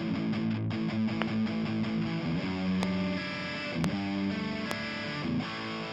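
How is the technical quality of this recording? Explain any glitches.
Four loud pops break the recording, at 1.22–1.24 s, 2.83–2.85 s, 3.84–3.86 s and 4.71–4.73 s. Each is a single sharp click lasting about 20 ms. The first two stand roughly 20 dB above the sound, and the last two are a little louder still. The likely cause is a sudden voltage spike, such as static or a switching glitch, added to the signal. The sound continues unbroken beneath each pop.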